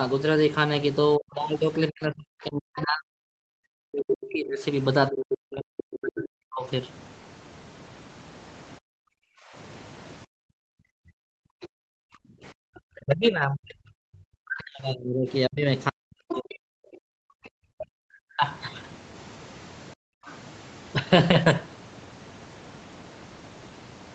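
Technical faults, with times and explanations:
1.17–6.66 s, 8.8–18.43 s and 19.94–19.98 s, speech suppressed in double talk: the voice sinks by up to roughly 40 dB in pieces, likely because the echo canceller ducked both talkers at once.
2.77–2.82 s, 5.77–5.83 s, 11.62–11.66 s, 16.29–17.84 s and 20.26–20.32 s, other side's voice leaking through: brief scraps, plus one longer stretch, sit about 10 to 30 dB under the speech, likely as loudspeaker echo left in the microphone.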